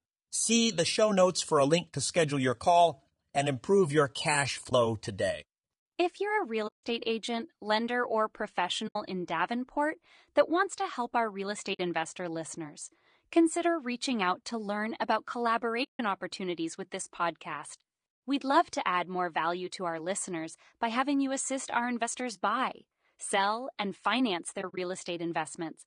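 Throughout, the speech sounds rough and grainy, with noise filling the gaps between harmonics and a thin, synthetic-sounding top band. This is likely low-delay AAC compression (AAC-ELD): its short frames resolve pitch harmonics poorly, and the damage points to a rate around 32 kbps.

AAC frame loss with muting occurs at 4.69 s (20 ms), 6.67 to 6.84 s, 8.87 to 8.96 s, 11.73 to 11.80 s, 15.83 to 16.00 s, and 24.61 to 24.78 s, where short gaps spread across about 160 ms with no run much over 40 ms. The decoder zeroed the missing frames, so the sound fades into a soft-edged silence and back.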